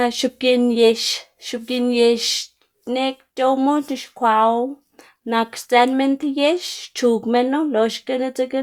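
A speech recording with no technical faults to report. Nothing in it calls for a time or a cause.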